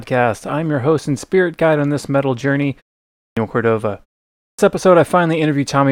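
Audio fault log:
3.17–3.37 s and 4.38–4.59 s, clipped start after a pause: after gaps of 0.44 and 0.41 s, the first 197 and 206 ms are swallowed while the output wakes, so the sound after "on this metal journey" starts abruptly.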